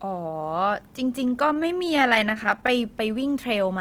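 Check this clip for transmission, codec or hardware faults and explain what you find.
There's one problem here: repeated stalls (stutter) from 1.47 to 2.70 s. The jitter buffer kept running dry, giving 24 brief gaps of at most 14 ms that were patched by stretching the preceding sound, about a fifth of that stretch in all. Nothing's lost, but it drags and stutters.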